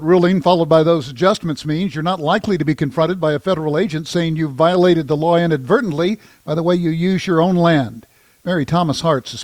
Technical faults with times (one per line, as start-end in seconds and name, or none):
none